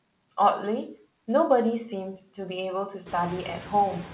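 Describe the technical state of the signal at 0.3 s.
At 0.3 s you're hearing noise suppressor artifacts, and they run through the whole clip. The suppressor tracks which frequency bands hold steady background noise and pulls them down frame by frame, here by about 15 dB. So the room noise drops away in the gaps between words and comes back up underneath them, giving a pumping feel. The band-limited call path shows too: nothing above 4 kHz, which fits a narrowband telephone codec.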